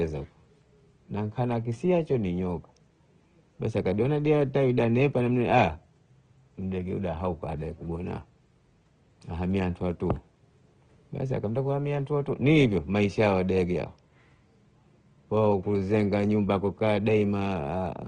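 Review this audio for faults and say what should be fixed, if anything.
Opus compression, throughout the clip: the speech has a grainy, rough texture rather than swirling holes. That is what the music (CELT) mode does when it is short of bits. It preserves the energy in each band but fills the detail with folded copies of lower bands or with noise. Full bandwidth is kept, so the damage is plainly audible texture, not muffling. It likely comes from a low bitrate, with the sound pointing to around 16 kbps. The room noise sits about 49 dB below the speech and is faint beside this. To prevent it, encode at a higher Opus bitrate, or use the voice-oriented setting when bandwidth must stay this low.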